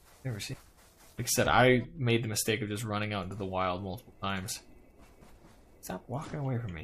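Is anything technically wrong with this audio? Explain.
Yes, there are two faults. At 0.53 s comes a skip ahead. About a second of audio is gone, dropped in transit or discarded when the jitter buffer overflowed while later audio was already queued. Playback jumps straight to that later material with no fill, so the sound lurches abruptly. A waveform shows an abrupt splice with no silent gap, and the spectrogram has a hard vertical seam where the two sides meet.

From 0.66 s to 3.15 s there is a jitter buffer speed-up. The buffer was holding more than its target, so the receiver trimmed short slices of one or a few pitch periods, again and again, removing roughly 200 ms in total. The sound runs at about 107% speed while keeping its pitch, and it feels slightly hurried. On a spectrogram the harmonics stay at the same frequencies while events arrive compressed in time, and the waveform shows small periodic cuts.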